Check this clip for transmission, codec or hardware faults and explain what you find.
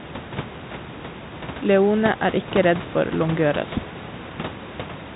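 Nothing in the transmission chain, codec or hardware has gone wrong here: the speech arrives as ordinary G.711 A-law telephone audio at 64 kbps, band-limited to below 4 kHz, with the room's background noise sitting about 17 dB under the voice as part of the recording itself.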